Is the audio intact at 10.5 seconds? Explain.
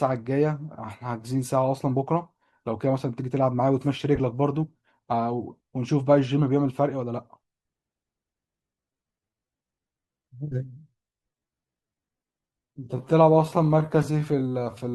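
No. At 10.5 s the audio falls inside a time-stretched section running from 8.37 s to the end of the clip, slowed to about 0.68 times normal pace. The pitch holds steady while delivery drags, most likely from software repeating short pieces to lengthen the passage.

A corrupt frame decoded also sits at 10.52 to 10.54 s, a single damaged compressed frame played as though valid. Misread data puts energy at the wrong frequencies for that brief span, heard as a short chirp, squeak, blip or burst of noise peaking around -30 dBFS.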